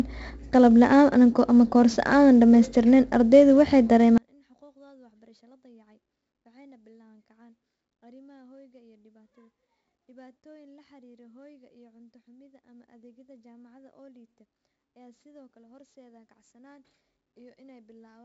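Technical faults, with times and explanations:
throughout: 4-bit ADPCM compression. A gritty, level-following hiss rides on every loud stretch of the speech, and hard onsets break up with a rough, distorted edge where the adaptive step size cannot grow fast enough to track the jump. Each sample is coded as a coarse 4-bit difference from a prediction, so the quantisation error is broadband and heavy here. Nothing is present above 7.7 kHz, which fits a 16 kHz sample rate and roughly 64 kbps.
4.18 to 18.25 s: one channel inverted. From 4.18 s to the end, the level drops by about 36 dB and what remains is a faint residue with the speech and background almost gone. This is likely one stereo channel with reversed polarity being summed to mono. The material common to both channels then cancels, leaving only the small difference between them. Because the channels are nearly identical, that difference is a faint copy rather than a usable signal.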